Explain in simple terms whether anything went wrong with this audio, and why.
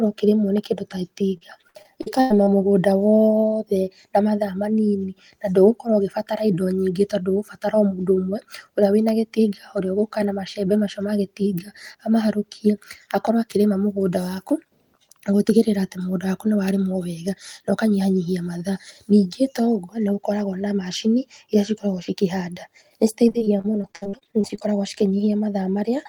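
Repeated packet loss (robotic sound) chops the speech at 1.37–2.49 s and 23.29–24.63 s: lost chunks, patched by stretching the previous sound, leave it choppy with pieces missing.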